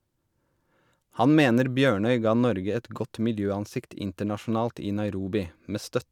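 Speech recording with no audible technical faults anywhere in the signal.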